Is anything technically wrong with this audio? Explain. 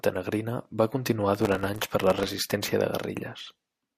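Yes. From about 1.4 s to 2.5 s the speech is overrun by processor overload crackle. The processor cannot finish its audio buffers in time, and dozens of deadlines are missed in a row. The pattern fits very short buffers of around a millisecond and a half. Each miss drops in a hard-edged sliver of silence, so the sound turns into a dense, gritty tearing that stops once the load eases. The gaps are too brief and too many to hear as separate dropouts, as network loss would produce. The grit also does not rise with loudness, as clipping would.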